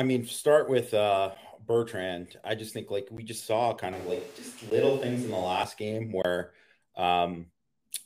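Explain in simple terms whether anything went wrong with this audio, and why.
Four times the audio cut out, leaving a block of digital silence: brief ticks at 1.35 s after "mean start with uh", 3.17 s between "I just think like" and "just saw", and 4.70 s, plus a longer hole from 6.22 to 6.25 s.

From 3.93 to 5.63 s, just after "just saw", the sound likely came from a switch to a distant microphone. It suddenly turns roomy and hollow, at about the same loudness.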